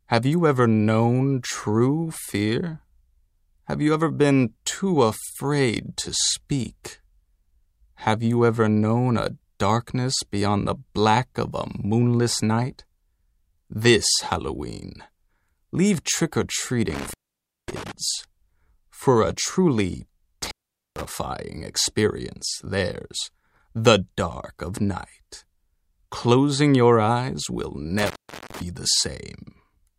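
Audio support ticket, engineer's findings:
Intermittent contact, three events. Dropouts at 16.90–17.92 s (line open about 0.55 s), 20.42–21.05 s (open about 0.45 s), 27.99–28.62 s (open about 0.40 s). Sound cuts out abruptly, crackle at each break and reconnect. Probable component: loose cable or plug in the signal path. Mechanism: conductor briefly losing contact, so signal drops and jumps back as the connection makes and breaks. Reseat or replace the connector.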